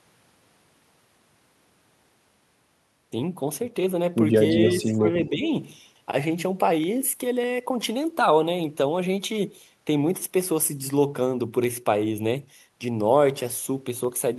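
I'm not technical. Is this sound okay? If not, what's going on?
No. From 0.23 s to the end, a click repeats every 0.6 s. These are clock drift buffer slips, likely two devices' clocks disagreeing slightly.

Between 4.53 and 5.46 s, the voice dips. This is speech suppressed in double talk, likely the echo canceller turning down both talkers at once.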